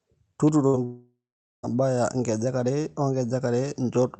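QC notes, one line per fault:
0.48 s, electrical switching spike: a sharp snap lands on top of the speech for about 13 ms. It is likely an arc from a nearby switch or discharge coupling into the line, so it adds to the sound rather than interrupting it.
0.67 to 0.76 s, burst of packet loss: roughly 60 ms of audio never arrived in time. The receiver stretched the last sound for about 59 ms as a fading buzz or hiss, then playback resumed further on with those 60 ms skipped.
0.85 to 1.66 s, long network dropout: about 0.78 s of audio is gone, likely from the network delivering nothing for that stretch. Concealment first extends the last sound as a decaying, 8 kHz-limited buzz or hiss, then gives way to roughly 0.47 s of silence before speech returns past the lost section.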